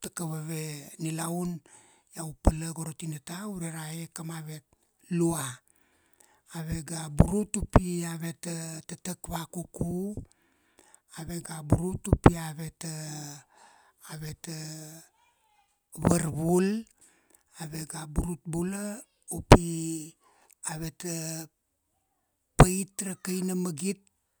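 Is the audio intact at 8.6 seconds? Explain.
Yes, the speech is intact at 8.6 seconds, with no dropout, click, distortion or other fault at that moment.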